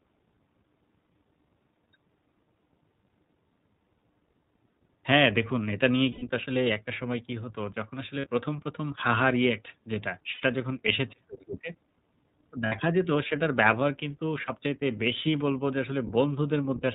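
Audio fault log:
Throughout: iLBC codec. The speech is band-limited to narrowband, with nothing above 4 kHz, and has a plainly audible rough, synthetic edge. The codec encodes each short frame's excitation independently, and the coarseness fits roughly 15 kbps with 20 ms frames.
6.12–6.24 s, 8.20–8.27 s, 10.34–10.45 s, 12.66–12.74 s, 14.46–14.51 s: lost iLBC frames. Gaps of about 100, 40, 80, 60 and 20 ms are filled by a held, slightly buzzy vowel-like tone. The decoder repeats the last pitch cycle mixed with noise, and because the frames are independent, the voice is right again almost at once afterwards.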